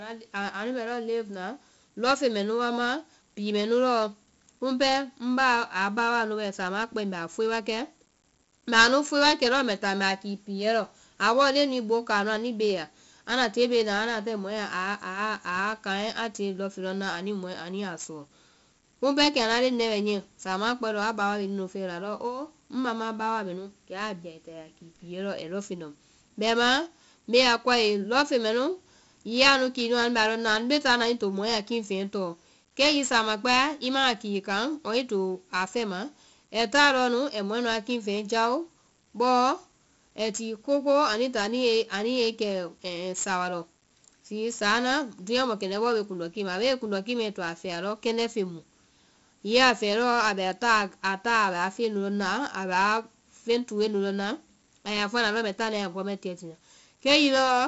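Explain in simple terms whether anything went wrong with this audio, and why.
The speech has been squeezed with 4-bit ADPCM compression from start to finish. Each sample is stored as a small guessed step, so a gritty hiss rides on every loud sound. Sharp sounds get roughened. Nothing above about 7.7 kHz survives, so everything sounds dull.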